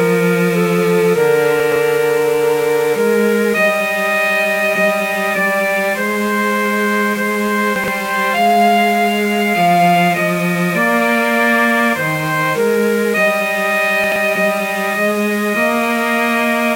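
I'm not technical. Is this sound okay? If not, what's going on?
No. Low bit depth without dither runs through the whole clip: a grainy, gritty roughness that follows the sound and is worst in quiet parts. The likely cause is the audio being stored with too few levels, as few as 5 bits, and rounded off without smoothing.

Chunks out of order happen at 1.6 to 1.76 s, 7.76 to 7.88 s and 14.04 to 14.16 s. A short slice of sound, about 40 ms long, plays a moment after the slices that should follow it, giving a brief jumbled stutter.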